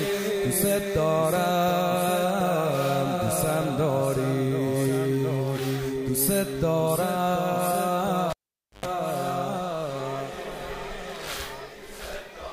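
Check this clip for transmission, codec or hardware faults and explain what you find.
One hardware fault is present. From 8.30 to 8.86 s, a cable is pulled and plugged in. A pop is followed by 0.5 s of near silence, then 0.11 s of 50 Hz mains buzz while the ungrounded tip touches, then a second pop.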